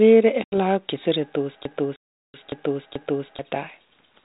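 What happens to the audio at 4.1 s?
At 4.1 s the speech carries on intact, with no dropout, glitch or other fault, only the narrowed telephone band of the 32 kbit/s G.726 ADPCM path that runs through the whole clip.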